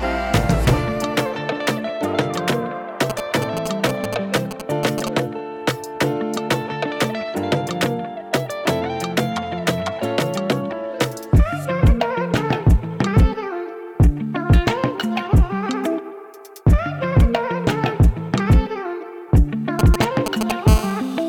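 GSM signalling bursts interrupt the audio from 3.10 to 5.09 s and again from 19.79 to 20.52 s. A nearby 2G phone is sending short groups of radio pulses, and the audio circuitry rectifies them into a galloping dit-dit-dit of short 217 Hz buzzes. The first group sits a little below the programme level, and the second is roughly as loud as it. On a spectrogram each group shows as clustered vertical stripes with a 217 Hz comb of harmonics. The waveform shows spiky packets with gaps between them. From 20.68 to 21.24 s the fault becomes a steady GSM phone buzz at about 9 dB below the signal. The phone is now transmitting continuously, as in a call, pulsing 217 times a second. The rectified pulses give a hard, raspy tone that has nothing to do with the audio. On a spectrogram it is an unbroken stack of evenly spaced horizontal lines at 217 Hz and its multiples. The waveform carries a regular pulsed ripple at that rate.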